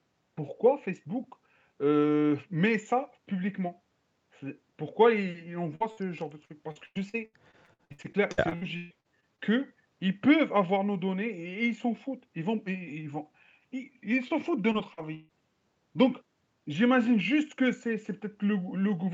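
At 5.75–5.83 s and again at 5.92–5.99 s, bursts of packet loss left the receiver extending the last sound for about 50 ms each time. This produces a brief held, fading patch before the speech jumps ahead.

From 6.45 to 9.40 s, repeated packet loss (robotic sound) hits 19 times, with gaps up to 140 ms. Patches fill roughly a third of the span, making the speech choppy and robotic.

At 14.28–14.32 s, a short concealed packet loss of about 20 ms becomes a quick smear.

From 14.72 to 15.31 s, repeated packet loss returns with four gaps, the longest 146 ms, breaking the speech up again.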